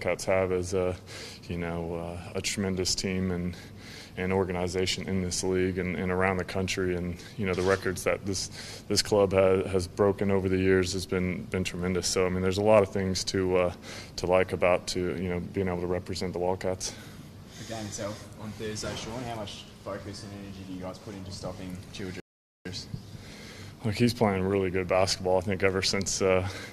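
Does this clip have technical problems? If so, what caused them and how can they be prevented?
Yes: a rebuffering stall at 22.2–22.65 s, where playback drained its buffer, went silent for about 0.45 s, then resumed without loss. Larger startup buffering or adaptive bitrate prevents it.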